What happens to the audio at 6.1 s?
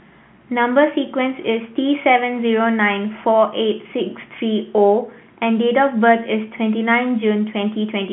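Nothing goes wrong at 6.1 s: the speech carries on intact through that moment, with only the narrow telephone band of the G.711 line heard throughout.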